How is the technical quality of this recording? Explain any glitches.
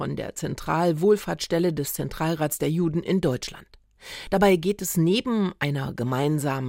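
There's one glitch worth pointing out: a short burst of damaged data in the compressed stream, from about 4.36 to 4.38 s. For roughly 24 ms the decoder hit corrupted bytes, couldn't read those frames properly, lost its place and had to hunt for the next valid frame header before it could carry on. What you hear is a quick garbled blip or chirp cutting across the sound at that point.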